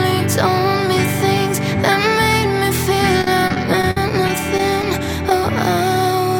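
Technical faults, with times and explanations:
3.21–4.83 s: repeated packet loss (robotic sound). Ten gaps, the longest 53 ms, drop about 160 ms of audio. The receiver patches each one by extending the previous sound, so about 11% of the stretch is filled in. The quick succession of patches gives a choppy texture with pieces missing rather than one isolated blip.
5.29–5.31 s: short concealed packet loss. Only 10 ms goes missing, and the receiver covers it by continuing the preceding sound before blending back into the real signal. It is a single brief smear or wobble, not the sustained chop heard earlier.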